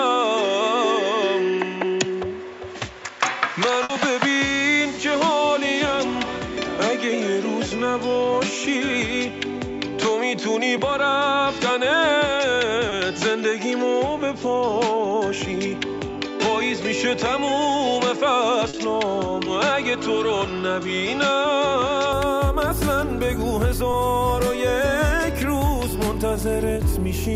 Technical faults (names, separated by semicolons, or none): input switched to a poorer device; burst of packet loss; short concealed packet loss